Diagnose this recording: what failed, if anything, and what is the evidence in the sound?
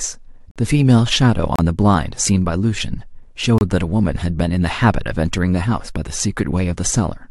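Short hard-edged silent holes break the speech at 0.51, 1.56 and 3.58 s, lasting about 45, 30 and 27 ms: a gap between stream segments at playback, where segment timestamps leave silence-filled spaces.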